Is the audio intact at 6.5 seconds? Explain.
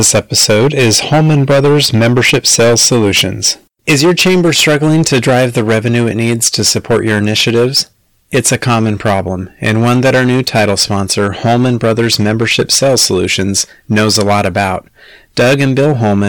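No. At 6.5 seconds the speech is affected by hard clipping, which runs through the whole clip. The signal is driven about 13 dB beyond what the stage can pass, so roughly one sample in seven is sliced flat at the ceiling. Those squared-off peaks spray harmonics high into the spectrum, giving a harsh fuzz on every loud syllable. Unlike soft saturation, which rounds peaks into a warmer thickening, this distortion is abrupt and gritty.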